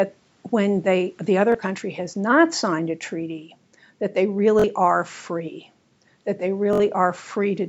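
Bluetooth stutter: audio packets failed to arrive in time, so the receiver replayed its last buffer. The sound buzzes briefly at 1.52–1.55 s, 4.60–4.64 s and 6.73–6.80 s, with gaps of 21, 43 and 64 ms, consistent with one, two and three missing packets.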